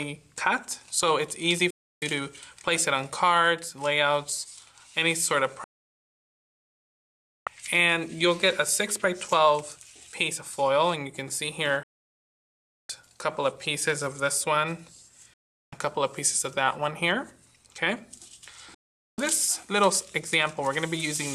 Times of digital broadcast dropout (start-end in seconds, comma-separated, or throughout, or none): 1.70-2.02, 5.64-7.47, 11.83-12.90, 15.34-15.73, 18.74-19.18